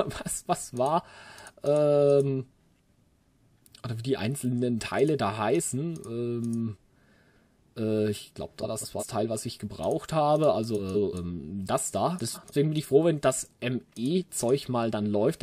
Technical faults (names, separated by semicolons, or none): frames out of order